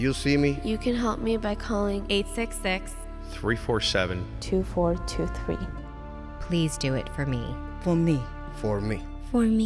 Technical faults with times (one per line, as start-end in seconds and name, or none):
none